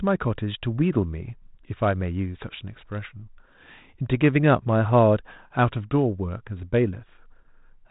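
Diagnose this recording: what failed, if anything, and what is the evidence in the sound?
Nothing in the recording points to a failure at any stage of the chain. The speech has gone through G.726 ADPCM at 32 kbit/s, which leaves only a light coding texture and nothing above 3.9 kHz, as expected for that path.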